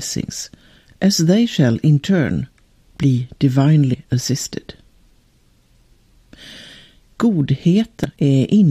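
Damaged data in a compressed stream breaks the decoder's frame sync at 3.93 to 3.95 s and again at 8.04 s, each heard as a brief chirp or blip.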